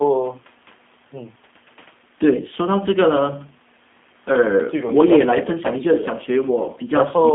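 From start to finish the speech carries G.729 codec damage, and it is plainly audible. A low-rate coder of this kind, consistent with about 8 kbit/s, models each short frame as a vocal tract filter plus a pitch predictor and a few pulses. The rebuilt voice comes out slightly rough and synthetic. A telephone-style band of 200 Hz to 3.5 kHz adds a thin, boxed-in quality. On a spectrogram, energy stops sharply at 3.5 kHz with nothing above, and harmonics look smeared.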